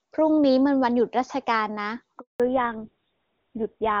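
At 2.20 s the call is handed from one network to another, and for the 200 ms of the switch no speech frames reach the decoder. This handover gap sounds like the speech fading out within a few tens of milliseconds and then going dead silent until 2.40 s, when the new link starts delivering audio again. Whatever was said in that fifth of a second is simply missing.

From 2.40 s to the end, the call falls back from HD Voice to narrowband. Before the handover, the speech had the crisp, wide top end and faint or no coding damage that fit AMR-WB at a high rate. On the new link it is carried by an older narrowband codec, consistent with GSM full rate, and nothing above 4 kHz survives. Sibilants and consonant detail lose their edge, and the speech turns duller, boxier and rougher for the rest of the clip.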